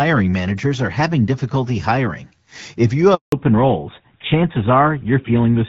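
At 3.14 s the speech drops out in a handover gap. The call is being passed from one network to another, and for about 180 ms, until 3.32 s, no speech frames make it across. You hear the voice fade almost instantly and then pure silence until the new link comes up. Whatever was said in that window is simply gone.

Right as the audio returns at 3.32 s, there's a fallback to narrowband that lasts to the end. Before the gap the speech has that light, airy HD Voice quality, with only mild codec colouring that fits AMR-WB at around 12.65 kbit/s. After it, nothing above 4 kHz survives. The sound points to GSM full rate at about 13 kbit/s, so the voice goes duller and rougher, with the sibilance and crispness cut off.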